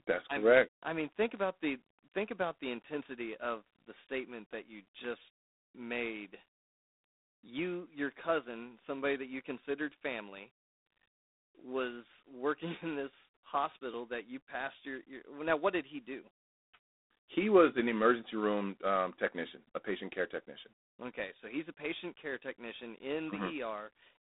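Throughout the speech, G.726 ADPCM coding is plainly audible. Each sample is carried as a few bits of difference from a prediction, and too few bits leave a harsh, rasping hiss. That fits 24 kbit/s. Unlike steady line noise, it rises and falls with the speech. Nothing passes above about 3.8 kHz.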